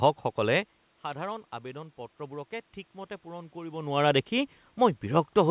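No technical faults are audible.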